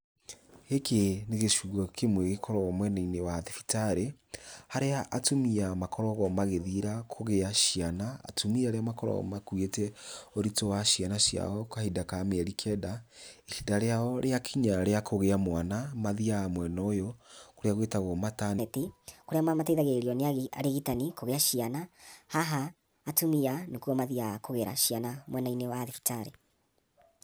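At 18.58 s, right after "mwena ũyũ kũrĩa gwĩtagwo", the speech jumps into a section at the wrong speed that lasts to the end. It plays about 1.33 times too fast, so the voice rises roughly five semitones and sounds hurried and thin, likely from a player or editor running that portion against the wrong clock. On a spectrogram, harmonics and formants step upward and syllables compress horizontally; the waveform shows tighter, shorter bursts.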